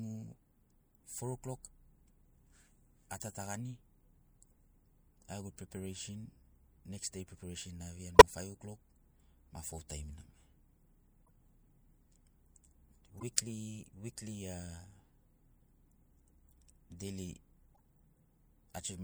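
Five short bursts in the speech are the corrupt frame decoded fault, at 3.40–3.46 s, 8.15–8.22 s, 11.26–11.30 s, 13.08–13.23 s and 17.75–17.80 s. Damaged compressed frames were decoded anyway, so misread gains and codes put energy at the wrong frequencies, each lasting two to seven frames. A chirp or noise blip is added, loud near 8.2 s, faint near 11.3 and 17.8 s.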